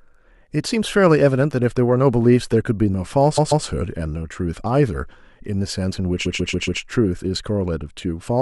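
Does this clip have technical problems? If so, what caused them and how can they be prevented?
Yes, there are repeated frames. A 139 ms block of the speech plays again twice at 3.37–3.65 s and four more times at 6.25–6.81 s, adding time. Unlike an echo, each repeat is an exact copy. Prevention: deduplicate frames during writing and transmission.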